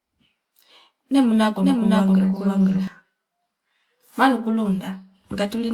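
A doubled audio track runs from 1.6 to 2.9 s: a second, full-band copy of the speech trails about half a second behind, a few decibels quieter, with no room colour, starting and stopping abruptly. Likely a slower capture path mixing the same signal in twice.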